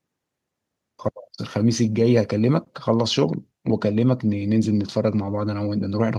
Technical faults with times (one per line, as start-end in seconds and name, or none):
none